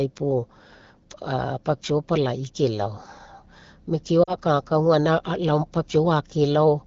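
Speech clip with lost AMR speech frames from 4.24 to 4.35 s: about 40 ms of audio drops into a brief concealed dip, consistent with two missing 20 ms frames, before the decoder recovers.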